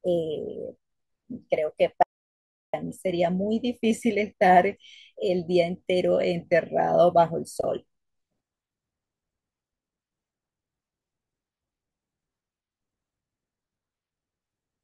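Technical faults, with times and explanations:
2.03 to 2.74 s, audio dropout to silence: the speech cuts off abruptly mid-flow and about 0.71 s of digital silence follows, with no room tone or background underneath, before the sound resumes just as suddenly. A gap of complete silence rather than quiet points to the input signal being lost while recording or encoding carried on, likely through a momentary disconnect, link failure or accidental mute. Whatever was spoken in that interval is not recoverable.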